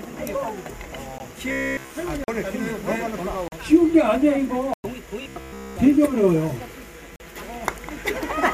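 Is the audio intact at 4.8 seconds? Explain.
No. At 4.74 to 4.84 s a 105 ms block of samples became zeros, a block of digital silence. The sound drops abruptly to nothing and returns with no fade, leaving a short hole.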